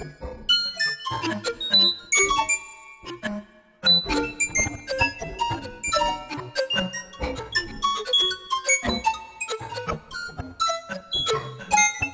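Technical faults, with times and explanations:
Nothing here sounds like a technical fault; the audio just carries on steadily with no glitches worth flagging.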